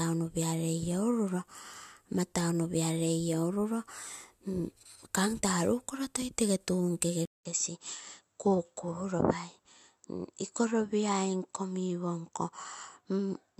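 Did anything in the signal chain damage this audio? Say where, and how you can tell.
Yes. At 7.25 s a 200 ms silent gap, then speech boxier and about 5 dB lower, with faint new background noise; spectrogram empty above 7.8 kHz, likely an input switched to a poorer device.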